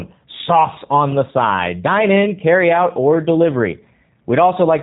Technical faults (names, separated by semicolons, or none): G.729 codec